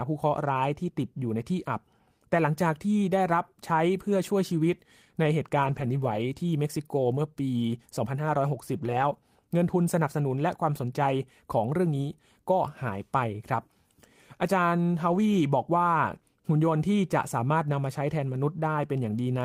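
The speech turns briefly rougher and grainier, without any gap, at 5.63 to 6.17 s, 8.77 to 9.03 s and 15.11 to 15.17 s. Each is a lost packet rebuilt from error correction: the decoder played low-bitrate copies carried in later packets.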